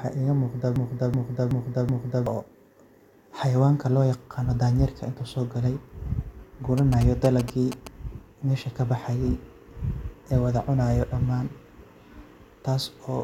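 From 0.76 s to 2.26 s the speech is caught in a broken-record loop: a fragment of about 0.38 s plays four times back to back, each repeat identical, and whatever should have been said in that stretch never arrives. The likely cause is a player or stream that stalled and kept resending the last block it held. Unlike a stutter or packet-loss glitch, the repeats are long, seamless and exactly the same, not ragged or shortened.

Between 6.78 s and 7.88 s come GSM signalling bursts: a galloping dit-dit-dit of short buzzes pitched at about 217 Hz, sitting fairly prominently, only somewhat below the speech. A nearby 2G phone exchanging signalling with its network radiated these bursts, and the audio circuit rectified them into sound. Mains hum would be a steady 50 or 60 Hz drone. This buzz is higher, and it comes in clipped, rhythmic groups.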